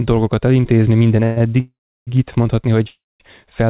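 A narrowband speech recording carried over a call path, with nothing above 4 kHz, which fits G.711 A-law at 64 kbps. It has three call audio freezes: 1.24 to 1.38 s, 1.60 to 2.09 s and 2.89 to 3.22 s. At each one, the last sound is drawn out as a fading buzz. In the second freeze this then falls to silence for about 340 ms, and in the third for about 210 ms. The likely cause is packets held up in transit, so that the jitter buffer ran dry. The speech then resumes where it stopped, adding delay without losing content. Right after the first freeze, from 1.38 to 1.42 s, a short stall from a late packet holds the sound for a further 17 ms with a slight buzz. That packet missed its slot, and the receiver stretched the previous audio until it arrived.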